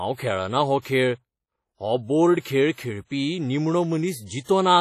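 From start to finish the speech carries heavy transform-codec damage, most likely WMA compression at a low bitrate, with a sound that fits roughly 32 kbps. Long coding blocks smear quantisation noise tens of milliseconds around each syllable, so consonants ring and pre-echo while vowels turn washy. The noise floor hisses and swells with the level of the speech. Quiet spectral detail has been discarded, and there is nothing above 14.2 kHz.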